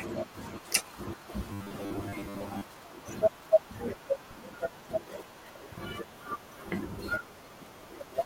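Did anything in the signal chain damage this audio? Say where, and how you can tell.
Yes. Robotic sound from repeated short buffers, 1.53 to 2.63 s. Speech becomes a rigid 100 Hz buzz. A starved buffer likely looped 10 ms chunks, replacing about half the audio.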